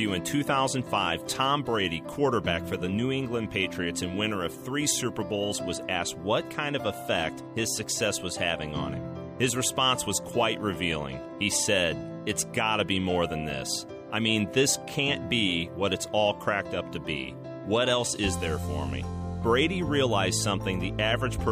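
Nothing is technically wrong with this clip; no faults can be heard anywhere in it.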